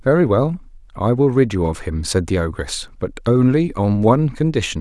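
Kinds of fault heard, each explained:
No faults are audible anywhere in this recording.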